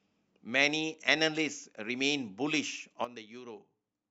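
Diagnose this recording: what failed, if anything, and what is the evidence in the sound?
A sudden gain jump hits the speech at 3.05 s: the level drops by about 12 dB in a single step and stays there to the end of the clip. The likely cause is a digital gain setting or bit shift in the processing chain applied without a ramp. What separates this from a talker turning away or an automatic gain control easing down is that the background noise falls by the same amount at the same instant, with no gradual slope.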